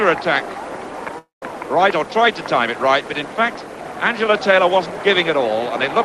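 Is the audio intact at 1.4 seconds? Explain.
No. At 1.4 s the clip is inside a gap from 1.18 to 1.43 s, most likely a long network dropout. The last sound is stretched into a buzzy tail that fades, followed by about 160 ms of silence before the audio returns with roughly 240 ms simply missing. A brief packet loss would be smoothed over in a few tens of milliseconds. Here the fading fill gives way to silence, and the audio resumes with a jump.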